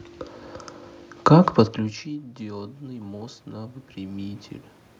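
In this speech recording, voice and room noise swell together from 1.29 s to 4.49 s, a slow rise of about 6 dB. This is automatic gain rising: after the input fell by about 23 dB, as the talker moved away around 1.5 s, the gain control gradually compensated.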